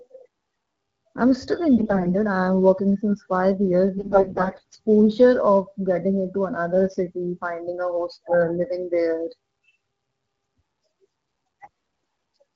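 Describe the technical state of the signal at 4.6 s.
AMR bit errors are hitting the decoder at that moment, across a span from 3.98 s to 4.78 s, just after "working since five years" and ending before "of getting into another". The weakly protected bits of each AMR-WB frame are arriving corrupted, roughly one in seven, while the core checksum still passes, so the decoder trusts the damage. Its excitation pulses land in the wrong positions and the fine pitch, gain and spectral values are off. The speech keeps its general pitch and loudness but turns hoarse, scratchy and gargly.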